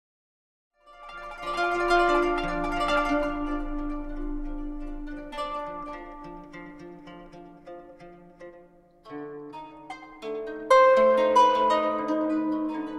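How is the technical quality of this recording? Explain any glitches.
The technical quality of this recording is good, with no glitches to explain, only a smooth fade-in that starts around half a second in and reaches full level at 2.09 s.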